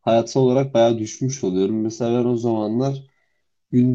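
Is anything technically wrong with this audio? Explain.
Yes. From 1.0 s to the end, the speech slows abruptly to about 0.74 times its original pace, yet its pitch holds steady. This is a time-stretched section, likely produced by software lengthening the audio by repeating short slices rather than playing it back slower. Unlike a plain playback-speed or resampling error, which would drag the pitch down along with the tempo, this keeps the pitch unchanged.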